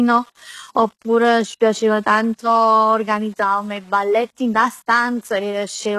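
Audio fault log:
throughout low bit depth without dither: Quiet speech sounds grainy, with error noise about 35 dB below it. Likely rounding to 8 bits without dither.
throughout HE-AAC compression: Codec damage is plainly audible, with nothing above 12.3 kHz. The treble is copied up from lower bands. This fits a likely 16 kbps stream.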